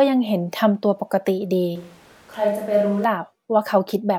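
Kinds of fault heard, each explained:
Switch to a distant microphone: from 1.76 s to 3.04 s the speech abruptly turns roomy and hollow, drops by roughly 5 dB and loses bass, while room noise comes up to about 30 dB below the speech. It then snaps back just as suddenly. The likely cause is the close mic cutting out and a farther one taking over. The waveform shows a sudden step down in amplitude. The spectrogram shows thinner lows, smeared reverberant tails and a raised noise floor across that span.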